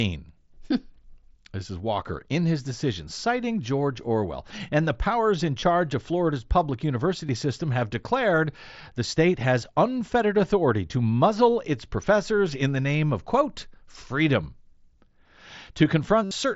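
Concealed Bluetooth headset packet loss occurs at 5.60 to 5.62 s, 7.27 to 7.29 s and 16.24 to 16.31 s. Voice packets between the headset and phone were lost, and the receiver filled each gap by repeating the best-matching recent stretch of waveform. The first two gaps last about 22 ms, which fits three lost frames. The last runs about 68 ms and is three times as long, so the repeated fill holds noticeably longer there, all through the mSBC wideband link.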